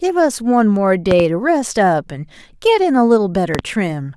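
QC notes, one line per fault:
1.11–1.23 s and 3.55–3.62 s, loud pop: each event is a pair of sharp pops standing well above the speech, which continues underneath undisturbed. This is likely a voltage pulse from a plug, switch or static. Unlike clipping or dropout, the speech is never flattened or cut.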